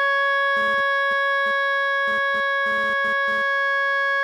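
A music clip with GSM phone buzz from 0.57 to 3.42 s: a raspy 217 Hz rasp, about 18 dB below the music, from a nearby phone transferring data, so it comes and goes. On a spectrogram it shows as stacked harmonics spaced 217 Hz apart, appearing in intermittent blocks.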